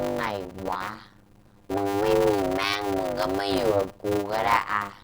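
Speech that buzzes steadily at 100 Hz and runs at about half speed, 0.533 times normal, with its pitch roughly unchanged, throughout. This is a block size mismatch (padded): short blocks, which fit 256 samples, are zero-filled to a longer read size, leaving a gap each cycle.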